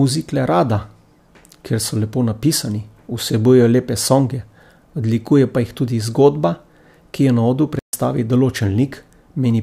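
At 7.79 s the player likely ran short of buffered data or had its output thread held up, causing a playback stall. The speech drops to silence for about 140 ms, until 7.93 s, then carries on, leaving an abrupt hole mid-flow.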